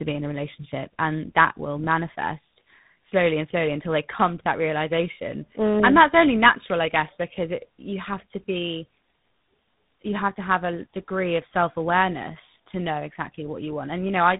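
Tandem speech coding runs the whole way through. The speech sounds like it was coded twice, likely GSM then G.726, so it's rough, warbly, and dead above 3.8 kHz.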